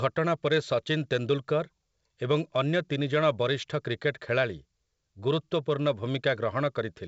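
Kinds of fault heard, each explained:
No faults are audible in this speech clip. It has passed through G.722 wideband telephone coding at 64 kbit/s, so the sound stops at about 7 kHz or a little above, with nothing heard above that.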